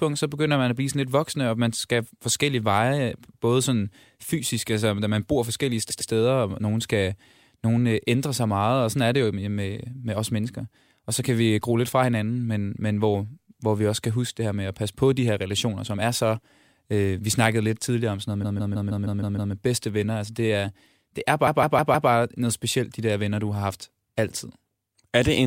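Repeated frames stutter the speech at 5.89 s after "da man bor forskellige" (a 0.10 s block plays twice more), at 18.43 s (a 0.16 s block, seven extra times) and at 21.46 s (four extra). Unlike an echo, each repeat is an identical copy, and it adds time.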